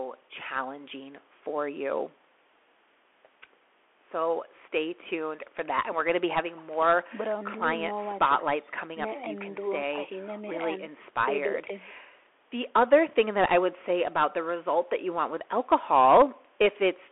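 Bluetooth CVSD headset codec damage runs throughout the speech. Each sample becomes one up-or-down bit with an adapting step, consistent with a 64 kbps link, and the band is confined to 300 Hz–3.4 kHz. Loud highs outrun the step and distort, s sounds turn scratchy, and granular hiss sits underneath.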